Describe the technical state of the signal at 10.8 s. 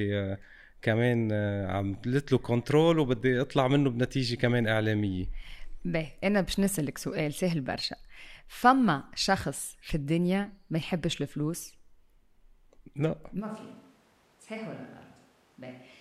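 At 10.8 s the speech signal is intact, with no audible fault at that moment.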